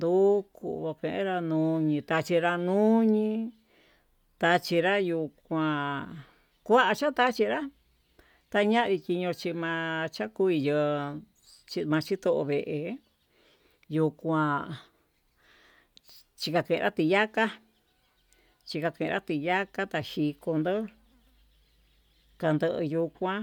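No technical faults are audible anywhere in the speech.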